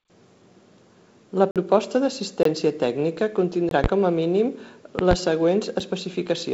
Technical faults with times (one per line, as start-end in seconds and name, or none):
1.51-1.56 block of digital silence
2.43-2.45 block of digital silence
3.69-3.71 block of digital silence
3.84-3.88 loud pop
4.99-5.15 loud pop
5.80 block of digital silence